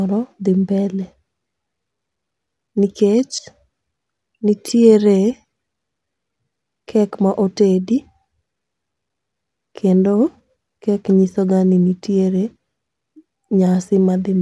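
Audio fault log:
Nothing wrong turned up anywhere in this bit of speech, so there's nothing to log here.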